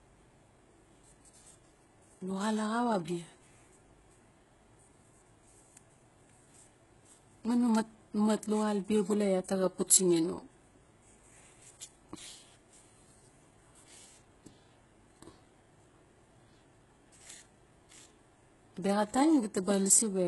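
Speech clip with heavy HE-AAC compression throughout, likely from a very low bitrate around 12 kbps. Replicated treble sounds gritty and lispy, with nothing above 11.5 kHz.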